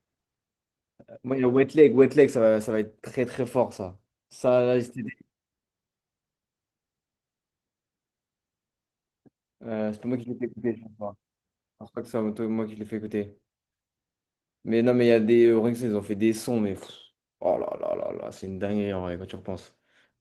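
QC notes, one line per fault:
Throughout: Opus voice compression. The speech sounds hoarse, grainy and slightly robotic. The damage is plainly audible. The band is not narrowed and the top end stays present. The texture points to hybrid coding: a linear-prediction coder handles the range below 8 kHz and a transform layer handles the range above it. Too few bits go to the excitation, so it is coded coarsely. This fits a low bitrate of about 16 kbps with 20 ms frames.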